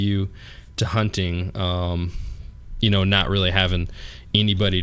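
A short speech recording with no technical fault to point to. Nothing in it calls for a time stamp or a cause.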